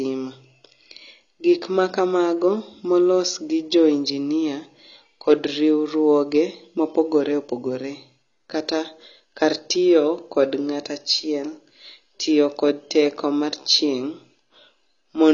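AAC compression runs throughout: the speech has nothing above 7 kHz, sounding dull and smeared, with a warbling, fizzy texture on sibilants and held sounds. This is likely AAC-LC at a low bitrate, fitting roughly 24 kbps, where the encoder drops high bands and starves the remaining spectrum.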